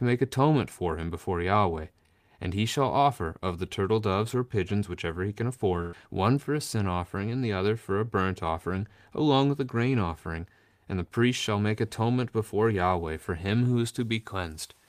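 At 5.81 s, just after "pigeons whichever he can", a burst of packet loss hits. About 120 ms of speech is lost or late. The receiver extends the last sound for 112 ms, fading it. Speech resumes at 5.95 s with "one for a sin".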